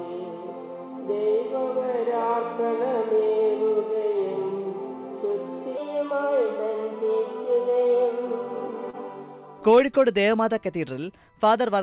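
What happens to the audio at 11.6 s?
At 11.6 s you're in a section at the wrong speed, from 5.77 s to the end, likely played against the wrong clock: everything runs 1.12 times fast and sits about two semitones sharp.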